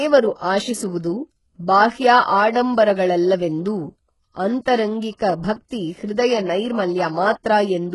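It's a speech clip, and the whole thing carries heavy HE-AAC compression damage. The top end sounds synthetic: the treble has been rebuilt by copying lower bands upward, so it doesn't line up harmonically with the real spectrum underneath, and the s sounds come out gritty and lispy. There's nothing at all above about 11.5 kHz. That's most likely HE-AAC at a very low bitrate, with the damage pointing to something around 12 kbps.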